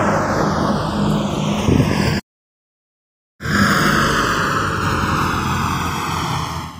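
Throughout, the channels drift apart: two devices on separate clocks, roughly 150 ppm off, let the inter-channel delay creep to about a millisecond, sweeping comb notches as slow flanging.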